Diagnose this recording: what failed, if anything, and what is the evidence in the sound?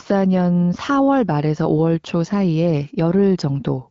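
Nothing failed; no stage shows any fault.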